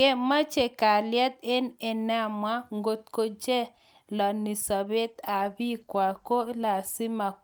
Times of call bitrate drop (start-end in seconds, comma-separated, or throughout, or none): 5.06-6.99